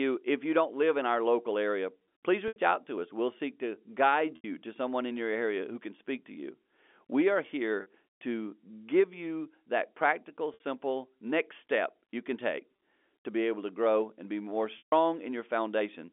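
Packet loss with pitch repetition occurs six times. Stretches of the stream went missing and the receiver bridged each gap by repeating the last pitch period. At 2.48 s, between "our local area please" and "out to us", 80 ms is lost. Another 80 ms goes at 4.36 s, 40 ms at 7.82 s, and 60 ms at 10.54 s after "give you that practical". At 12.76 s, after "step you can take", a single 20 ms slot drops, which points to 20 ms packets. The shorter gaps come through the G.711 telephone band as a brief, buzzy held tone. The 140 ms loss at 14.78 s runs past the fade and sinks into silence before the sound cross-fades back.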